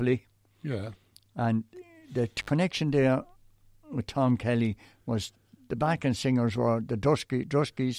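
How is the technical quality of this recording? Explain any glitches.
There is one glitch. At 2.39 to 2.50 s the sound drops out with crackle, an intermittent contact: a loose cable or plug briefly opening the signal path for about 62 ms.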